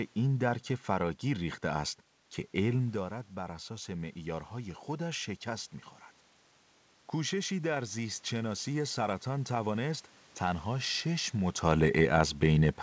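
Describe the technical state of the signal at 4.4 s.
Automatic gain rising: after the input dropped by about 10 dB, the gain control ramps up about 4 dB from 2.96 to 5.75 s, so voice and room noise swell together.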